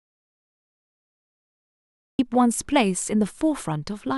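The clip opens in an audio dropout to silence until 2.19 s. No room tone remains. Speech cuts in mid-flow. The input was likely lost.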